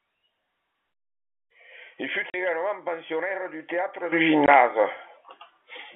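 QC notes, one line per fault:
2.30–2.34 s and 4.46–4.48 s, packet loss filled with silence. The audio drops out twice, for 40 ms just before "également pensionnaire du" and then for 20 ms. The gaps suggest two 20 ms packets lost, then one. Silence was played in their place, so each hole starts and ends with a hard edge.
4.12 s to end, sudden gain jump. The level steps up by about 12 dB from one sample to the next and stays there. The background noise rises with the sound, which points to the gain stage rather than the source. This is likely a gain change applied without a ramp.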